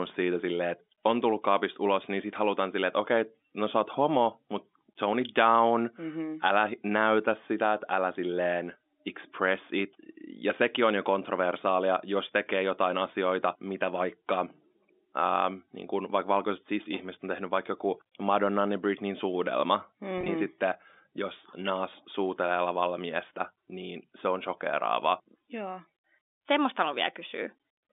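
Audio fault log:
20.18–20.28 s packet loss with pitch repetition: a brief buzzy flutter before "sitten jos", as gaps of up to 20 ms were patched by repeating the last pitch period.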